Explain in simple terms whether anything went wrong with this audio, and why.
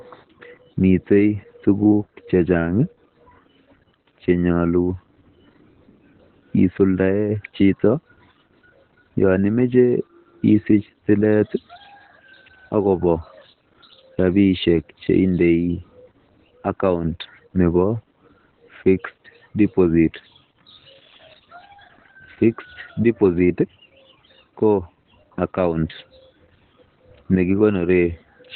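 Opus voice compression was squeezed very hard on this speech, from the first second to the last. To save space, the coder kept only the lowest part of the sound, cutting off everything above about 4.4 kHz, and described the rest of each sound only roughly. That is why the whole recording sounds muffled and telephone-like, with a hoarse, slightly robotic edge on the voice instead of clear, crisp consonants.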